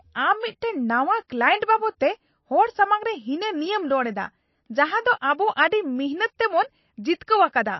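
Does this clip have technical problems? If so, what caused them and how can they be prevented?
Yes. Throughout the speech the treble stops abruptly at 5.8 kHz, and the remaining sound is plainly watery, with swirling artefacts and smeared consonant attacks. This is likely MP3 compression starved of bits, which fits a bitrate near 27 kbps. Encode at 128 kbps or higher to prevent this.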